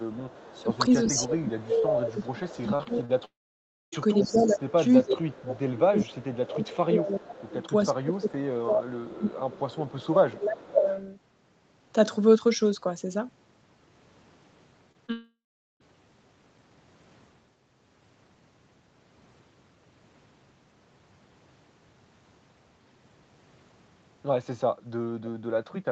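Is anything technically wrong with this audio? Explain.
Yes, this speech clip has four kinds of call fault.

Echo leak, at 0.11–4.73, 5.48–6.57, 7.51–7.87, 9.10–10.04, 10.88–10.96 and 25.25–25.30 s. A delayed copy of the speech, lagging 0.38 s, sits about 15 to 35 dB below it. The likely cause is a far-end loudspeaker whose echo canceller let some microphone pickup return.

Speech suppressed in double talk, from 0.52 to 10.87 s. The speech dips in pieces by up to about 25 dB, for around seven seconds in total. This likely happened because, with both sides talking, the echo canceller could not separate the talker from the loudspeaker echo and attenuated both.

Short concealed packet loss, at 2.75–2.81, 2.83–2.87, 3.05–3.11, 14.92–14.96 and 15.06–15.10 s. Each gap of 20 to 40 ms was patched by the decoder, which extended the preceding sound and then blended back in. Each one comes through as a brief smear or wobble.

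Long network dropout, at 3.25–3.94 and 15.12–15.82 s. Each time, about 0.68 s of audio likely never arrived. The receiver's extended sound fades quickly, leaving about 0.61 s and 0.43 s of silence. The speech then resumes with that portion missing.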